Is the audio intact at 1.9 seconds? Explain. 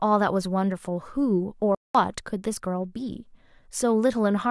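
No. At 1.9 seconds the speech is inside a playback stall running from 1.75 to 1.95 s, a gap of about 199 ms. The sound stops abruptly in mid-flow and the output stays silent for that fifth of a second before the speech resumes. The likely cause is the player running short of buffered data, or its output thread being held up, so nothing reached the output until it recovered.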